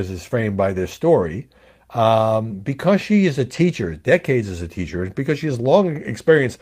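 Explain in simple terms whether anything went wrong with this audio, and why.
Three short patches of lost packet rebuilt from error correction occur in this speech, at 0.91 to 0.97 s, 3.53 to 3.59 s, and around 5.27 s. The first two last about 40 ms each, which fits two separate lost packets, and the last lasts about 20 ms, which fits one. Each next packet carried a rough backup copy, so the sound never drops out, but those moments sound grainier.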